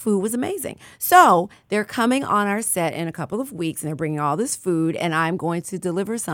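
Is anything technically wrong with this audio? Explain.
No, nothing technically wrong turns up anywhere in this one; it's a perfectly sound bit of speech audio.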